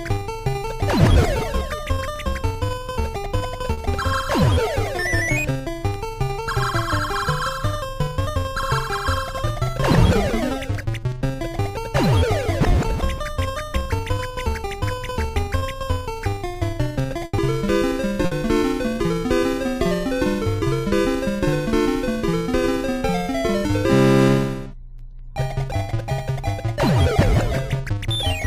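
At 3.73 s and again at 15.59 s there is short concealed packet loss: about 40 ms and then about 20 ms of audio never arrived at the decoder in time. The receiver bridged each hole by extending the preceding sound, repeating its pitch where it was tonal or substituting shaped noise where it was not, before crossfading back to the real signal. Each event is heard as a brief smear or wobble.

A burst of packet loss follows at 17.25 s, with 80 ms gone, and a second at 18.25 s, with 60 ms gone. These gaps are long enough that the concealment continues the last sound while attenuating it, so a tonal sound becomes a fading buzz and anything noisier becomes a dying hiss. Playback then resumes further along, with the audio between missing entirely.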